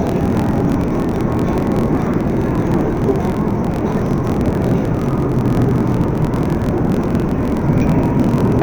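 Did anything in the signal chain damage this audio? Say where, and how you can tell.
Yes. The damage sits at the sample-format conversion stage, where interleaved audio was read as planar throughout the clip. Everything plays an octave low (12 semitones down) while its overall pace stays correct, and the sound is doubled and choppy, flickering at about 43.1 Hz. That points to blocks of about 23.22 ms, which fits a 1024-sample block. Each block's alternating left/right samples were split into halves, and each half was stretched to half speed. A sample-rate mismatch would also drop the pitch, but it would slow the timing too. Here the timing is intact.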